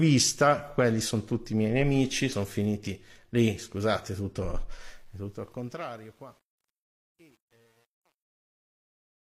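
Compressed frames skipped at 2.28 to 2.34 s, just after "tutti i miei nemici" and before "finiti lì scusate tutto": roughly 50 ms of audio never plays, because whole frames were lost from the stream or rejected by the decoder as damaged. The sound leaps forward by that chunk.

Truncation distortion on a fade runs from 4.82 s to 9.37 s, after "finiti lì scusate tutto". The fade-out that begins at about 4.8 s is passed through a volume stage that keeps too few bits, consistent with a 9-bit word length, and adds no dither. As the level drops toward the smallest step, the waveform collapses into coarse square steps. From 5.58 s onward the tail turns gritty.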